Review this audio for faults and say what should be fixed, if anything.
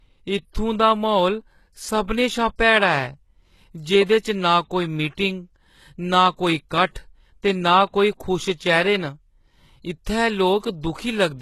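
The whole clip carries plainly audible damage that sounds like HE-AAC compression, likely from a low-rate encode. The treble is there but synthetic: the upper band is rebuilt by copying lower bands upward under a coarse envelope, so the s sounds come out gritty and a bit lispy, and nothing reaches above about 12.3 kHz. The degree of smearing fits a bitrate around 16 kbps. To prevent it, encode at a higher bitrate or use plain AAC or Opus so the treble is coded rather than replicated.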